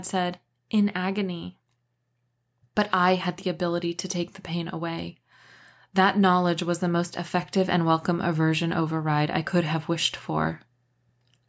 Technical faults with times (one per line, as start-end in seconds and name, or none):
none